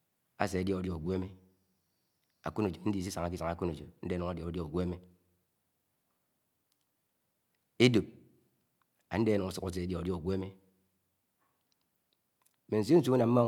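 Nothing in the recording stood out as a technical fault on listening.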